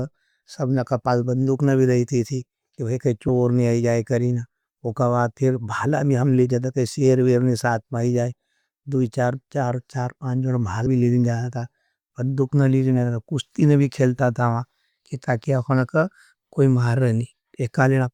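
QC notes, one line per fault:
10.86 s, compressed frames skipped: just after "चार चार चार पांज़ण" the speech jumps ahead by roughly 150 ms, about five whole frames, which fits a 32 ms frame size. The decoder drops frames that are missing or damaged. Unlike a buffer dropout, no silence is inserted. The sound simply lurches forward, with a stretch of speech missing.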